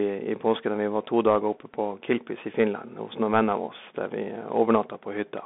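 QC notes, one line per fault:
Throughout: Bluetooth CVSD headset codec. The spectrogram is empty above 3.6 kHz and below 200 Hz. One-bit slope coding, fitting 64 kbps, adds granular hiss and scratchy sibilants.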